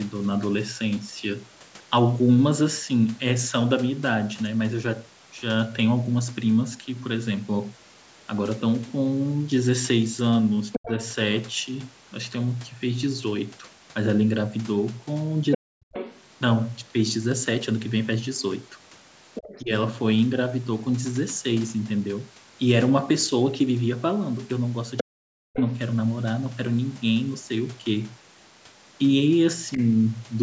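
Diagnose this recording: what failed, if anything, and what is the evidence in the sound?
The call processing stage is where it breaks down, and the other side's voice leaking through is the first clue. A second voice sneaks in at 10.72–11.15, 15.51–16.22, 19.34–19.62, 24.97–25.73 and 29.72–29.84 s, sitting roughly 5 to 20 dB under the main talker. That's likely residual echo: the far end plays on the loudspeaker, the mic picks it up again, and the echo canceller doesn't fully subtract it.

The same canceller also causes speech suppressed in double talk. While both sides overlap, the near talker gets pushed down hard, around 40 dB at its deepest, at 10.77–10.92, 15.55–15.83 and 25.03–25.6 s, and more gently, about 10 dB, at 19.62–19.72 s. The dips line up with the leak windows. That's likely the suppressor failing to separate the talker from the echo, so it turns everything down, and the voice briefly cuts out or thins.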